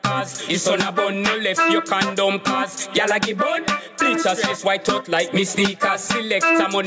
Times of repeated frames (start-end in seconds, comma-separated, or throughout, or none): none